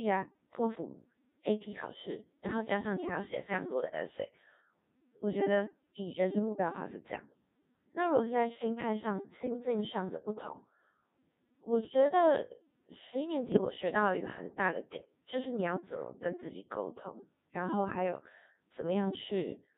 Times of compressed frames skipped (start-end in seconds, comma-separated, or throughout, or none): none